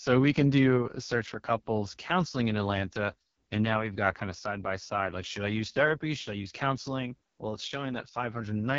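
From start to finish the speech has passed through the AMR wideband (HD Voice) codec at its lowest mode, which fits about 6.6 kbit/s. The vocal model is starved of detail, so the speech turns heavily rough and raspy, with nothing above 7.4 kHz.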